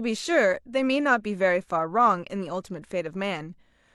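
Nothing here to flag: the speech runs without any audible technical fault from beginning to end.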